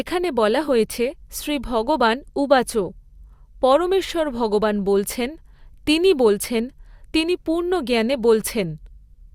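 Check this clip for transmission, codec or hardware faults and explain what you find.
Nothing stood out on listening to this speech recording.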